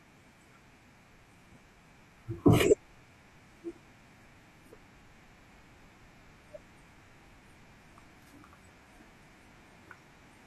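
At 0.79 s and 9.84 s the speech jumps ahead, losing roughly 0.3 s then 0.15 s: compressed frames skipped.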